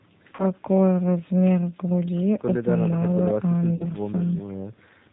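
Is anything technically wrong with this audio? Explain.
Yes, a couple of things. The whole clip carries G.729 codec damage, clearly audible: at about 8 kbit/s the speech is rebuilt from a vocal tract filter, a pitch predictor and a few pulses per frame, so it sounds rough and slightly synthetic, and nothing above 4 kHz gets through.

Then there's VoIP packet loss concealed by the speech codec, twice: from 0.35 to 0.45 s and from 3.76 to 3.84 s, each covering roughly 40 ms of lost audio, which fits a pair of dropped packets. The decoder fills the gap by extending its last pitch and filter at falling gain, so you hear a brief stretched, fading smear, and the speech stays a bit weak just after.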